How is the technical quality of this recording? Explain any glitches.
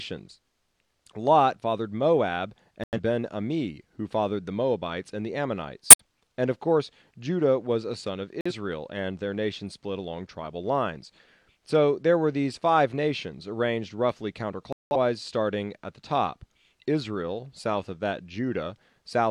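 The recording has four sudden dropouts where the sound cuts to complete silence and then resumes, at 2.84 to 2.99 s, 5.90 to 6.03 s, 8.41 to 8.52 s and 14.73 to 14.96 s. They last from about 0.11 s to 0.23 s. These are corrupt frame muted faults: damaged compressed frames were rejected by the decoder and replaced with silence. The gap lengths point to one to four frames lost each time, and the surrounding timing stays intact.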